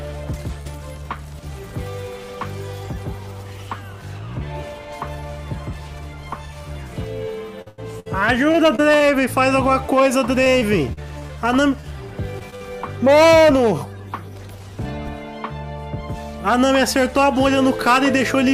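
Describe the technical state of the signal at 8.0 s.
At 8.0 s the signal is in a stretch of repeated packet loss (robotic sound), running from 7.62 to 9.02 s. About six short holes, the longest 94 ms, are each patched by stretching the preceding sound, so roughly a fifth of that span is synthetic fill. The result is choppy, with pieces missing. Unlike a single dropout, the gaps keep recurring in quick succession, and the fill continues the last sound rather than leaving clean silence.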